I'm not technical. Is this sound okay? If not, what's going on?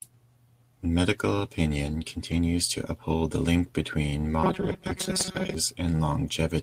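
No. There are two problems.

From 2.31 to 2.37 s, a lost packet was rebuilt from error correction. A small piece of audio, about 40 ms, likely from a couple of lost packets, went missing. A rough backup copy filled in, so there's no gap, just a brief grainy, noisier moment.

From 4.44 to 5.55 s, the speech turns into robotic sound from repeated short buffers. It sounds stiff and metallic, with a steady buzz around 188 Hz. The likely cause is new audio arriving too slowly, so a tiny slice kept repeating and roughly half the real sound was skipped.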